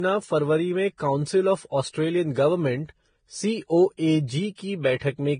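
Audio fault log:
Throughout: transcoding between lossy codecs. Nothing is present above 9.7 kHz, and the speech carries the different coding artefacts of the chain heard together. The likely cause is a chain of lossy encodes: a low-rate Vorbis pass, then an AAC-LC pass, then a second Vorbis pass. Each later encoder spends bits re-coding the earlier artefacts and adds its own. The lowest band limit in the chain survives, which produces the 9.7 kHz ceiling.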